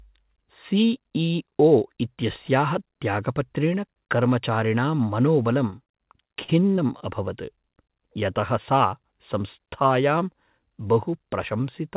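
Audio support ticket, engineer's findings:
Short concealed packet loss, four hits clustered mid-clip: 5.70–5.74 s, 5.84–5.88 s, 6.44–6.50 s, 6.76–6.80 s. Brief smears; the 6.44 one is longest, about 40 ms missing. Jitter buffer/receiver side: packets late or lost, decoder stretched the last sound, then crossfaded back. Gaps of roughly 20 ms fit single packets dropping. The 4 kHz band limit is just the call path, which sounds like narrowband G.711.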